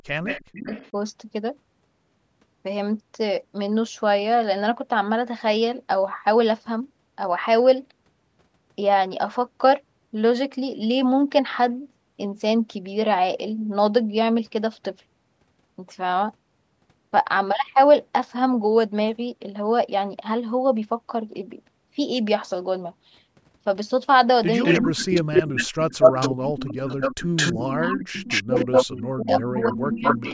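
At 0.0 to 0.95 s, speech is suppressed in double talk: the echo canceller, likely unable to tell the near talker from loudspeaker echo while both sides spoke, pulled the speech down by roughly 40 dB, chopping away about half a second of it. Overlapping this, at 0.26 to 0.91 s, an echo leak, likely from a speakerphone's incomplete echo cancellation, returns a copy of the speech 322 ms late, around 10 dB quieter. From 24.63 s to the end, the two faults alternate and overlap. Echo leaks at 24.63 to 25.66 s, 26.02 to 28.91 s and 29.31 s onward return a 215 ms delayed copy roughly as loud as the speech itself, which makes it a distinct doubling. Double-talk suppression at 24.77 to 26.76 s and 27.54 to 30.24 s drops the speech by roughly 30 to 35 dB, over about one and a half and two seconds in total. Under the call's microphone processing, the speech has nothing above 8 kHz.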